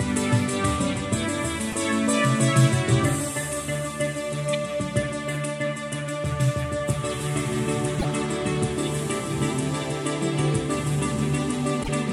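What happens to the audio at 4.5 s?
At 4.53 to 4.55 s there is damaged data in a compressed stream, a burst of about 24 ms heard as a short chirp or blip that breaks into the audio. Part of the encoded stream at that point is corrupt, so the decoder misreads the affected frames, loses sync and scans forward for the next valid frame header before normal decoding resumes. The garbled output during that search is the artefact.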